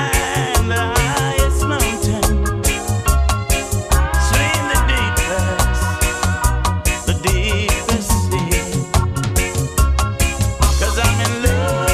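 No audible technical faults anywhere in the recording.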